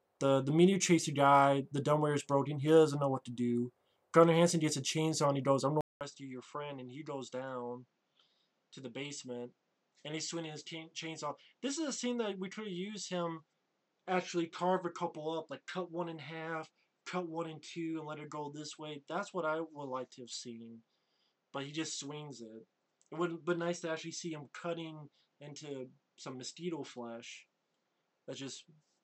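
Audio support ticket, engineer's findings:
At 5.81 s, a 0.2 s dropout. Sound then dull and boxy to the end, nothing above 8 kHz. Level roughly 10 dB lower, with a faint new noise floor. Likely input switched to a poorer device with a narrower band.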